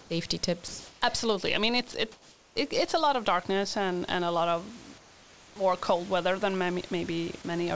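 Comfort noise in place of the background appears at 0.0–0.10 s, 0.68–1.02 s, 2.12–2.56 s (before "it it's a lot") and 4.98–5.56 s (between "and a lot of" and "cold weather than"). The likely cause is discontinuous transmission: the sender paused, and the receiver synthesised a smooth, steady hiss. Its level shifts against the real room noise, about 9 dB quieter at the start, then roughly +1, −2 and −3 dB. On a spectrogram these stretches show as featureless, evenly smeared bands that, like the speech, stop at 8 kHz. The waveform shows a flat, uniform floor.

At 1.92 s, just after "I mean", there is a brief sound dropped by the voice detector. It was likely misjudged as background, so 20 ms of sound is replaced by noise. It is heard as a brief patch of steady noise, and it shows as a short notch of smooth noise where the speech energy should continue.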